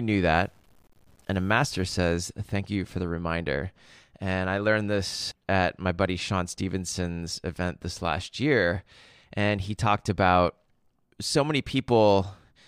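From 0.33 to 1.83 s the speech turns grainy, likely low bit depth without dither from truncation to about 9 bits. The waveform shows visible steps, and the spectrogram shows signal-tracking noise about 40 dB down.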